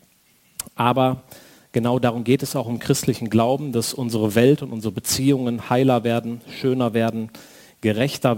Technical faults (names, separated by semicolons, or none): crude rate conversion